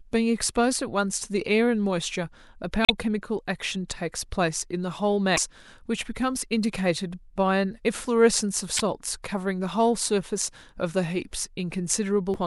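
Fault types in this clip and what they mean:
Damaged data in a compressed stream: corrupted frames throw the decoder out of sync, producing four short glitches of 43 to 66 ms, seen as abrupt smeared vertical bands and waveform discontinuities.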